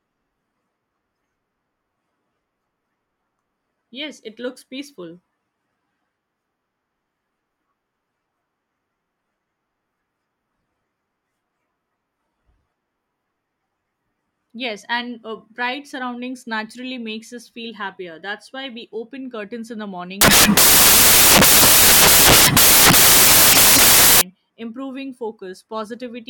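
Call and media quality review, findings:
Samples built from the wrong bytes, 20.21 to 24.21 s, just after "open curtains in the". Four seconds of loud, harsh broadband noise replacing the speech, close to white on loud passages. Probable component: decoder or sample reader misaligned by a byte or with swapped byte order. Low bits become the high part of each value.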